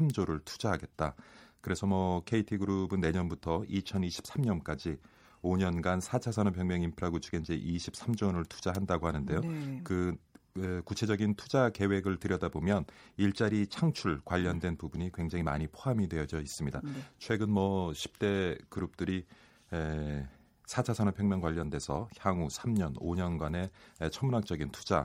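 Speech recording; no technical faults heard anywhere in the clip.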